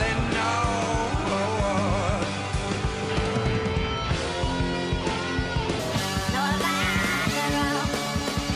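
From 5.79 s to the end, the sound turns high and hurried, about 6.5 semitones sharp and 1.45 times fast: a wrong sample rate, consistent with 22 kHz material played at 32 kHz.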